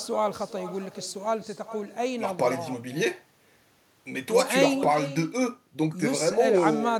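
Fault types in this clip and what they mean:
Echo with no canceller: the far end's loudspeaker output is picked up by its microphone and sent back unremoved, so the talker's speech returns around 0.4 s later as a thinner copy at about 14 dB below the original, running for the whole clip.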